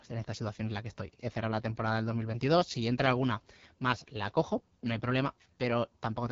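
Throughout, the AMR wideband (HD Voice) codec is running at a low rate, likely near 8.85 kbit/s, so the speech sounds plainly rough and raspy, with nothing above 7.5 kHz.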